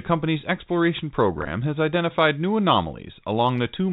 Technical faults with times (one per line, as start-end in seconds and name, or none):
1.39-1.47 packet loss with pitch repetition